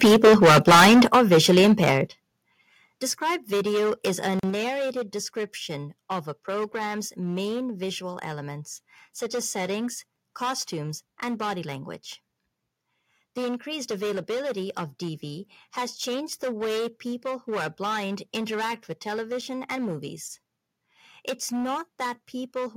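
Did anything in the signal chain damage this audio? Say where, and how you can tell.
Yes. Hard clipping runs through the whole clip, most plausibly at a converter or a sample-format conversion. The signal is driven about 12 dB beyond what that stage can pass, so roughly a tenth of the samples have their peaks sheared flat. Those flat tops add high harmonics, heard as a persistent harsh fuzz on every louder stretch of the speech rather than as isolated crackles.

Microphone overload sits on top of that from 0.03 to 1.05 s, ending just before "or visually", and this stretch was likely pushed into the converter at the microphone input. The input peaks run about 9 dB over full scale, and something like 40% of the samples there are cut off. The result is a harsh, crackling edge on the loudest syllables.

Microphone volume stepped down is the call-processing response to that overload, seen as abrupt drops in level of both speech and background: about 2 dB at 0.04 s, about 10 dB at 1.05 s, about 9 dB at 2.07 s right after "or visually", and about 3 dB at 4.5 s after "video is a". 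Each step is instantaneous rather than ramped, which points to gain control likely lowering the device's input volume in discrete jumps after detecting clipped peaks.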